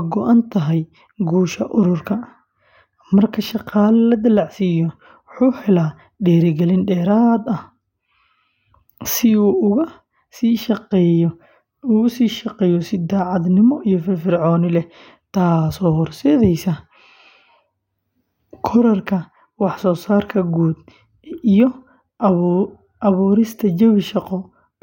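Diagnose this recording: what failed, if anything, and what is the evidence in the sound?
Nothing in the chain failed here; no stage leaves an audible fault anywhere in the speech.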